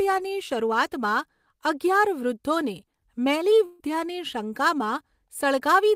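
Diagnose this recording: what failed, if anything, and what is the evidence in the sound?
The network stage failed with a burst of packet loss from 3.65 to 3.81 s. About 140 ms of speech never arrived. The receiver stretched the last sound across the gap, fading it down instead of going silent. Speech then resumes, skipping the missing stretch.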